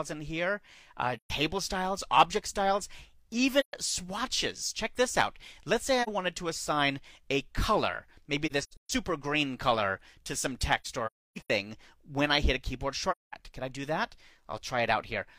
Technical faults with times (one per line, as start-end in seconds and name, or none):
1.16-1.30 AAC frame loss with muting
3.60-3.73 AAC frame loss with muting
6.02-6.09 AAC frame loss with muting
8.46-8.90 AAC frame loss with muting
10.80-11.50 AAC frame loss with muting
13.11-13.34 AAC frame loss with muting